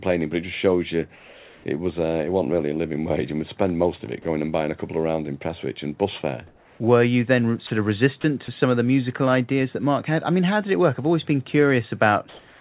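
From 1.16 to 1.64 s, between "it just shows you" and "it was uh it", comfort noise takes the place of the background, likely because discontinuous transmission stopped sending during the pause and the receiver synthesised a substitute. It sounds flat and textureless, about 2 dB quieter. On a spectrogram it is an even, featureless band below 4 kHz. The same happens from 6.47 to 6.8 s after "and bus fare", and from 12.29 s to the end, where it is about 3 dB louder.

Sound dropped by the voice detector occurs three times, each about 30 ms long. The first, at 4.22 s between "spend most of it" and "and buying a couple", cuts about 20 ms of sound. The others, at 7.67 and 8.21 s, each lose about 30 ms. The likely cause is the detector mistaking speech for background. Each one is a brief spell of steady noise or near silence, showing as a thin notch in the waveform.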